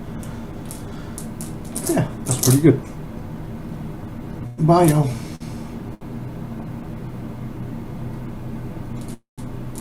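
At 4.47 to 4.60 s the sound freezes: the last sound is carried on as a fading buzz or hiss for about 108 ms, likely a call audio freeze where delayed packets left the jitter buffer empty. Playback then resumes where it stopped, so nothing is lost. At 5.35 to 5.43 s and 5.94 to 6.04 s there are two short stalls from a late packet. The receiver holds the last sound for 50 ms and then 66 ms until the packet lands, giving a slightly drawn-out sound with a slight buzz or dip before continuing. At 9.14 to 9.41 s a second call audio freeze fills 239 ms, and the held sound decays into about 130 ms of silence before the audio picks up again.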